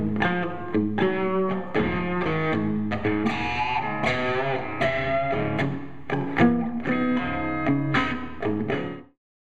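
No technical faults are audible.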